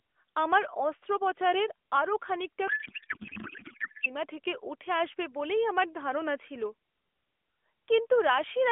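A codec payload misread runs from 2.68 to 4.16 s: octet-aligned AMR frames decoded as bandwidth-efficient, so the speech turns into garbled warble barely following it.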